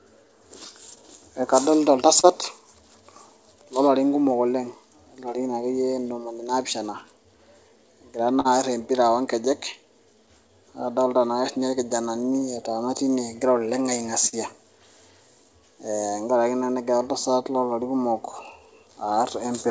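Clock drift between sender and receiver runs through the whole recording. The sender's clock is slow, by about three percent against the receiver's. The jitter buffer keeps draining as a result. The receiver must stretch the audio to keep it flowing. Nothing here is a single loud event. It is a steady mismatch underneath the speech, carried over a G.722 call path at 64 kbps, with nothing above 8 kHz.

Repeated timing corrections follow from that drift. They start at 0.24 s and continue to 19.47 s. The receiver repeats short pieces of sound again and again, all in the same direction. The effect is a playback speed of about 98 percent. Roughly four tenths of a second is added in total. Each edit is small. If heard at all, they come as slight hiccups at irregular spacing.

Scattered short gaps appear in two stretches. The first runs from 0.65 s to 2.25 s. It holds about three holes, the longest around 30 ms. 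The second runs from 5.92 s to 14.34 s. It holds about seven holes, the longest around 40 ms. Packets arrived late or went missing one at a time. The receiver filled each hole by extending the last sound. These are heard as brief ticks or smears in the speech.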